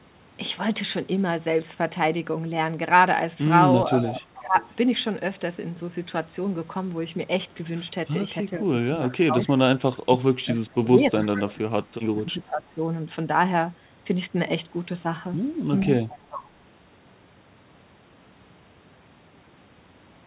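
From 4.0 to 4.56 s the talker's level dips by about 10 dB. This is speech suppressed in double talk, likely caused by the echo canceller turning down the whole signal while both sides spoke at once. Overlapping it, from 4.06 to 4.69 s, an echo leak returns a faint copy of earlier sound 429 ms late, at about 15 dB below the speech. The two differ by what is wrong: suppression makes the real voice weaker, while the echo adds a delayed duplicate on top of it.

Suppression returns from 8.58 to 9.49 s, dipping about 15 dB. A tiny echo scrap at about 25 dB down appears at 9.10 to 9.14 s. The deepest suppression runs from 10.02 to 12.81 s. There the sound drops by up to about 25 dB and is affected over roughly 2 s in total. Inside that stretch, from 11.24 to 11.43 s, more echo leaks through at about 15 dB down. A last echo leak comes from 15.81 to 16.44 s at the same 429 ms delay.

The fixed 429 ms lag identifies each of these as echo of the far side's playback, likely left behind when the echo canceller failed to remove everything the microphone picked up. 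It is not reverberation or a codec artefact. Throughout the clip nothing above 4 kHz is present, which fits the G.711 call path.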